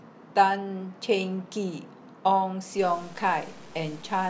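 Speech, and from 2.79 s to the end it becomes grainy, with distortion that tracks the signal and roughly 25 dB below it. Quiet tails sputter or drop out. Likely cause is low bit depth without dither, which fits truncation to 7 bits.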